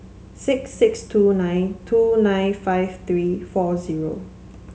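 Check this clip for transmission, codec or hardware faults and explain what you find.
Listening to this speech recording, nothing stood out as a transmission, codec or hardware problem.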